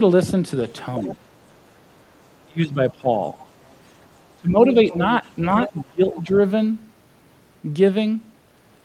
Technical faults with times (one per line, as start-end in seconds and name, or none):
0.95-1.16 other side's voice leaking through
1.16-1.28 speech suppressed in double talk
2.47-3.37 speech suppressed in double talk
3.23-3.73 other side's voice leaking through
4.37-5.24 speech suppressed in double talk
4.73-5.83 other side's voice leaking through
5.68-6.33 speech suppressed in double talk
6.14-6.36 other side's voice leaking through